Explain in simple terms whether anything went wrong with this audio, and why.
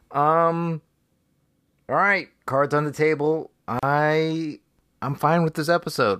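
Gap at a join of encoded pieces at 3.79 s: speech cuts out for 37 ms, because separately encoded chunks were stitched together with their silent padding left in.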